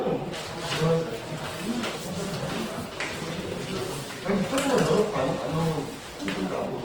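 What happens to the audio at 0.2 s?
Opus compression is present at 0.2 s, as it is across the whole clip. Short of bits, the encoder keeps each band's energy but fills bands with folded or noise content, so the sound turns rough, grainy and noisy, which likely points to about a 16 kbps CELT-mode encode.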